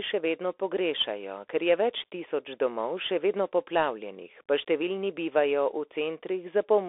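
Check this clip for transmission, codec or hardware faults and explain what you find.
One codec fault runs through the speech. Bluetooth CVSD headset codec, throughout: one-bit delta coding, consistent with a 64 kbps link, confines the speech to 300 Hz–3.6 kHz with nothing above 3.8 kHz, leaving scratchy sibilants and granular hiss.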